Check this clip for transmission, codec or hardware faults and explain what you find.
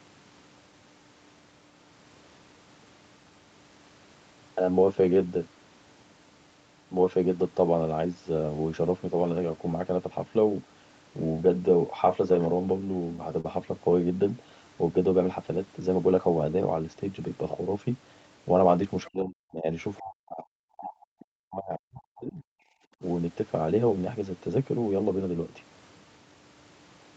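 Three kinds of fault are audible: a short stall from a late packet, the other side's voice leaking through, and speech suppressed in double talk.

From 13.41 to 13.45 s there is a short stall from a late packet. The jitter buffer ran empty, so the receiver held the last sound for about 38 ms. Nothing is lost, but playback runs 38 ms later from that point.

From 19.04 to 19.10 s the other side's voice leaks through as a brief fragment about 25 dB below the speech. The likely cause is loudspeaker echo that the echo canceller did not fully remove.

Speech is suppressed in double talk from 19.09 to 19.68 s and from 19.98 to 22.44 s, with level drops reaching roughly 40 dB. This is likely the echo canceller turning both sides down while they overlapped.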